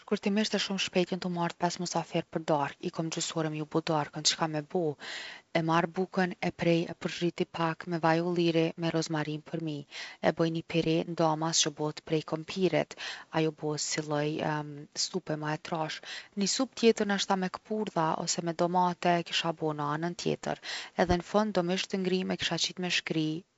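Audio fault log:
No fault to log.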